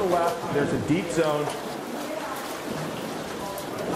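The recording path likely handled the audio in one-second chunks and dropped a tiny slice, around a hundredth of a second, each time it closed one chunk and opened the next: audio missing between chunks. The two sides are butted together with no gap, so the sound jumps forward slightly at 0.76, 1.74 and 2.73 s. Each is a brief, regular skip, spaced about a second apart, where the flow of the audio briefly stumbles.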